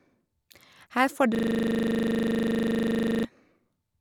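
From 1.35 s to 3.25 s, just after "får du", a system hang loop sets in. The system froze while the hardware kept replaying one 40 ms slice of its buffer. At 25 repeats a second this is a steady, gapless buzz, unlike a dropout's silent gaps.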